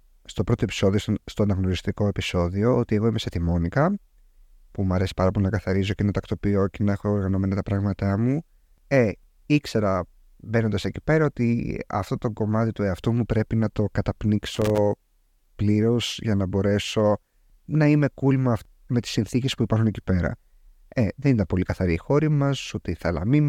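A worn or dirty contact somewhere in the signal chain of this speech recording made and broke contact rapidly as it shifted, producing loose connector crackle from 14.55 to 14.78 s, roughly a quarter of a second. While the contact flickered, the signal was chopped on and off many times in quick succession, so the sound there breaks up into an irregular burst of crackling and scratching.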